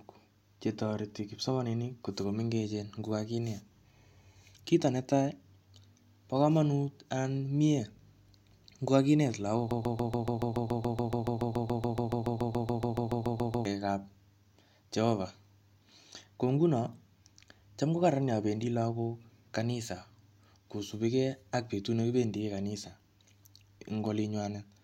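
At 9.71 s, right after "ngo kakinet lagok", a broken-record loop begins: a 0.14 s fragment repeats exactly, back to back, 28 times until 13.65 s, with the intended speech lost. The likely cause is a stalled player or stream resending its last buffered fragment.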